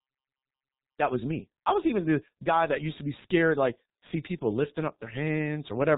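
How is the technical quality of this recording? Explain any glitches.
The speech has been through a G.723.1 codec for its whole length, with heavy damage. This early internet-telephony coder packs sound into 30 ms frames at roughly 6 kbit/s and passes nothing above 4 kHz. Its slowly updated voice model leaves the speech muffled and hoarse, with smeared consonants.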